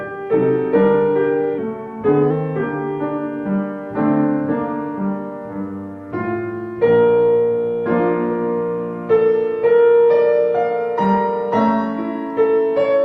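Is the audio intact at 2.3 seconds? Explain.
No. Between 1.58 and 2.30 s, a drift correction step in the clock-matching stage likely slowed playback by about 5.5% in a single jump to rebalance its buffer. Speed and pitch drop together, so the sound sags almost exactly a semitone flat (about 97 cents) and runs slow. At 2.3 s it is still detuned, right at the point where the step ends.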